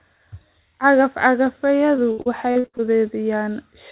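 From 1.96 to 2.81 s, repeated packet loss leaves seven gaps of up to 77 ms, patched by stretching earlier sound, so about a third of this speech turns choppy and robotic. The narrowband call path, which fits G.711 mu-law, carries nothing above 4 kHz.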